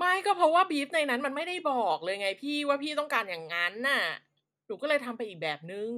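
No technical faults can be heard in this recording.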